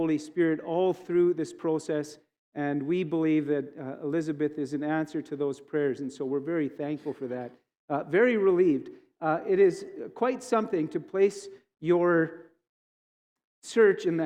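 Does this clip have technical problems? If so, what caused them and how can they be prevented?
No, this clip has no technical problems.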